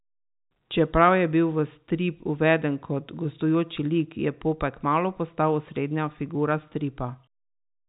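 No technical fault can be heard anywhere in this speech recording. The sound carries the narrow band of G.711 telephone coding, with nothing above 4 kHz, which fits an ordinary 64 kbps A-law phone line.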